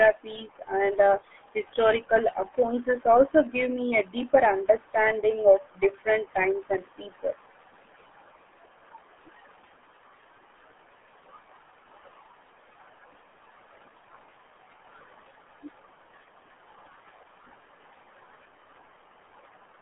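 From start to finish the speech carries RealAudio 14.4 codec damage: energy ends near 3.8 kHz and sits in a narrow 250 Hz to 3.5 kHz band, with heavy gargling smear that points to an 8 kbit/s stream. That smear distinguishes it from a clean telephone-band filter.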